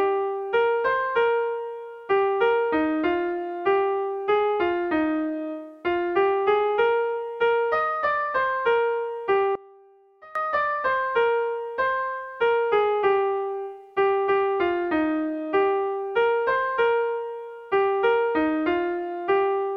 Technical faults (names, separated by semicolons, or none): one channel inverted